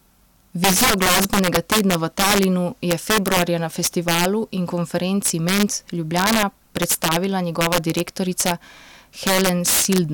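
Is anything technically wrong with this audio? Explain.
Yes. Throughout the speech, loud peaks burst into violent, sharp cracks, harsher than clipping. This is integer overflow: with gain about 11 dB too high, a small share of peak samples wrapped to the opposite sign instead of being limited.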